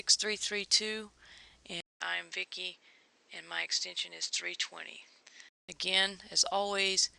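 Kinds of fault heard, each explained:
Input switched to a poorer device: from 1.80 s to 5.69 s the sound loses everything above 8.2 kHz, with a 200 ms silence at the switch, a new background noise well below the signal and little change in level, likely from recording moving to a narrower-band microphone.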